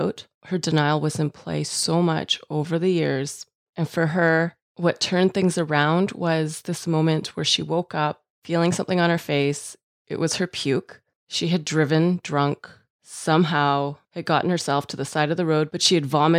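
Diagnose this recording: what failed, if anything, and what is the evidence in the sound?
Nothing failed, and the sound itself gives no evidence of any fault in this recording.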